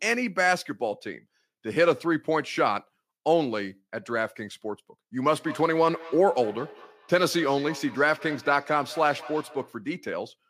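Two devices in the same room are joined to one call, so one replays what the other's microphone sent and that microphone catches it again, producing feedback echo between two devices from 5.37 to 9.82 s: the speech returns roughly every fifth of a second, thinner and ringing, peaking about 19 dB below it.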